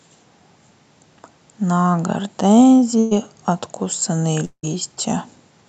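The clip is speech carried over a call link, with the highs cut off above 8 kHz. At 2.99 to 3.13 s there is a burst of packet loss. About 120 ms of audio never arrives. The receiver stretches the last sound into a short fading fill, then the speech jumps ahead. At 4.45 to 4.65 s the sound stops for longer. About 180 ms is missing. A fading fill runs first, then roughly 70 ms of silence before the speech returns. This is likely a long network dropout.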